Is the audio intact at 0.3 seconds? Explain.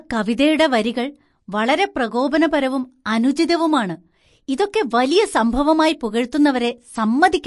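No, at 0.3 s you're already inside damage that runs through the whole clip, likely MP3 compression starved of bits, fitting something near 48 kbps. Nothing survives above 11.3 kHz, and weak frequency lines flicker frame to frame, so the speech sounds watery and swirly.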